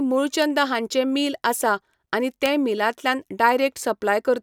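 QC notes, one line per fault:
0.42 s, 2.46 s, 3.49 s: bit error spike. Three isolated sharp ticks in the speech, peaking at about -13, -7 and -19 dBFS. Each is a flipped bit pushing two or three consecutive samples off by a power of two, so the clicks are broadband and unrelated to the signal.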